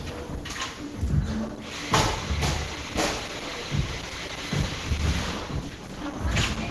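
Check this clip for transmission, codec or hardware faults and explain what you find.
One fault runs through the whole clip. Throughout, the sound is muffled, hoarse and grainy, with nothing above 12 kHz, likely Opus compression in its hybrid speech mode at a low bitrate around 16 kbps.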